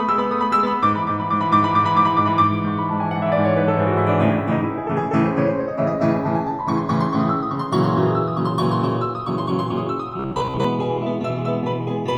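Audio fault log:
Throughout: channels drifting apart. The two channels appear to run on separate clocks differing by a few tens of ppm, so their offset creeps to a fraction of a millisecond. In a mono sum, comb notches sweep slowly through the music, heard as slow flanging.
10.20–10.64 s: robotic sound from repeated short buffers. The music takes on a rigid metallic buzz at 66.7 Hz, which fits a 15 ms chunk being replayed over and over. Most of the real audio is skipped, likely because new audio arrived too seldom.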